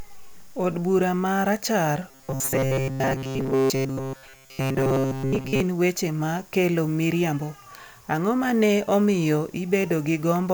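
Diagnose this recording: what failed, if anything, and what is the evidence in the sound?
From 2.11 to 5.60 s the speech becomes a rigid, metallic buzz at 133 Hz, ending just before "weche ma kelo miriambo". This is robotic sound from repeated short buffers, likely a driver or buffer underrun. A roughly 7.5 ms slice repeats, replacing most of the real audio.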